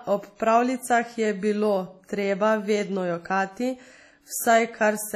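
Throughout the speech, heavy transform-codec damage is heard, likely WMA compression at a low bitrate near 32 kbps. Long blocks smear ringing, washy noise around each syllable, a hiss that breathes with the signal, and nothing above 15 kHz, unlike a plain low-pass, which would sound dull without that wash.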